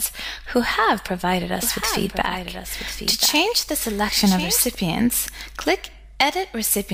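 From 1.63 s to 4.75 s there's a doubled audio track: a second, quieter copy of the sound, roughly 10 dB down, trailing about a second behind, with no decay or room tone, cutting in and out abruptly, likely from a slower duplicate capture path.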